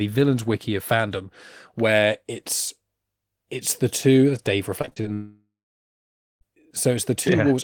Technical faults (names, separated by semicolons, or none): repeated packet loss (robotic sound); long network dropout